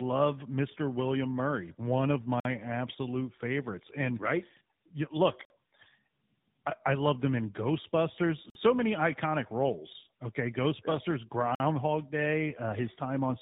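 From the start, the speech shows tandem speech coding. It passed through two speech codecs in a row, which points to GSM full rate and then AMR-NB. The second coder reworks the first one's damage. The speech sounds rough, muffled and warbly, with nothing above 3.8 kHz.

A gap between chunks appears at 2.40 s, 5.45 s, 8.50 s and 11.55 s. Each is a 50 ms hole with hard edges. They come every 3.05 s, which fits 3 s chunks with silence left at each join. No sound is lost, but the speech stops abruptly each time.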